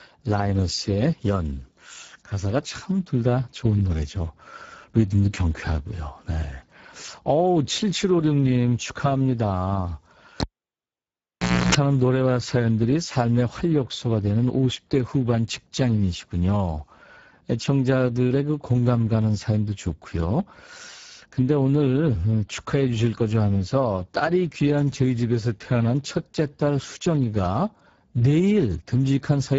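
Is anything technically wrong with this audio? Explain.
Yes, there are two faults. Throughout, the speech has been through the Speex codec at a low setting, around 10 kbps by the sound of it. The CELP coder has too few bits for the excitation, so the speech sounds noisy and hoarse, and nothing is present above 7.7 kHz.

From 10.40 to 11.75 s, a live cable is pulled and plugged in. A pop is followed by about 1.3 s of near silence. Then comes roughly 0.31 s of 60 Hz mains buzz while only the tip makes contact, and a second pop as the sound returns.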